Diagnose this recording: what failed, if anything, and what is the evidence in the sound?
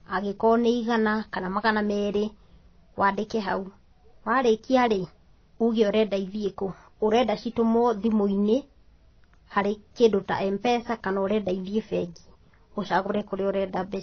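The codec stage let this one down, with transcoding between lossy codecs all through the speech. Nothing sits above 6.6 kHz, and smeary low-rate artefacts ride under a second layer of coding texture. That likely means a starved AAC-style encode that was later re-encoded as WMA, keeping the damage.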